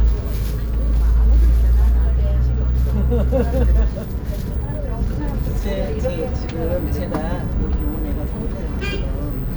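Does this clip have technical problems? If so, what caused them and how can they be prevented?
No, the signal of these sounds stays steady and intact throughout, with nothing in the recording or playback chain that needs preventing.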